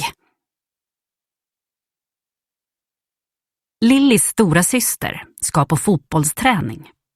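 No technical faults can be heard anywhere here.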